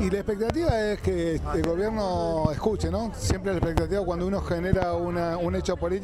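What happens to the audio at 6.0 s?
Nothing goes wrong at 6.0 s; the audio there plays through intact, with no dropout, click, distortion or other audible fault.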